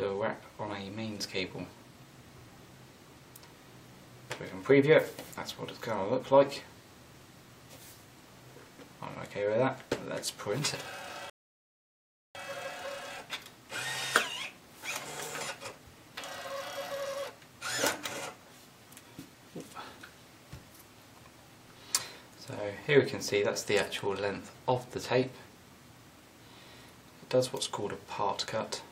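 A 29-second audio clip with a single rebuffering stall. At 11.30 s the sound cuts to silence. It stays silent until 12.35 s, then picks up exactly where it stopped. The player ran out of downloaded audio and had to wait for more data to arrive before it could continue. No audio is missing. The gap simply inserts about 1.05 s of dead air, so everything after it plays late by that amount.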